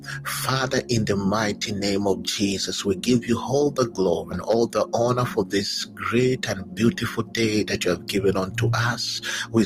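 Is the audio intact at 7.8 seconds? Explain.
Yes, the audio at 7.8 seconds plays through cleanly, with no dropout, click, distortion or other fault at that moment.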